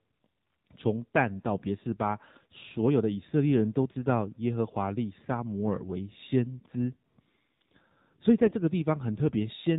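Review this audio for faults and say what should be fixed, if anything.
Across the whole clip the speech sounds thin, buzzy and synthetic, with nothing audible above 4 kHz. This is the AMR narrowband mobile codec, plainly audible here. AMR-NB samples at 8 kHz and rebuilds the voice from a vocal-tract model fed by a handful of pulses, so detail is lost. The degree of buzz points to a low mode of around 7.4 kbps. To prevent it, carry the call over a wideband codec such as AMR-WB, or at least use a higher AMR-NB mode.

From 8.46 to 8.53 s the speech briefly turns hoarse and gargly, with a scratchy texture, while its pitch and loudness stay roughly in place. These are AMR bit errors. On a weak radio link the less protected bits of the codec frames arrived corrupted, while the checksum over the important bits still passed. The decoder then placed its excitation pulses wrongly and used slightly wrong pitch, gain and spectral values. 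The 74 ms span fits about three 20 ms frames hit at an error rate of a few percent. To prevent it, improve link quality or use stronger channel coding so that damaged frames are concealed instead of decoded.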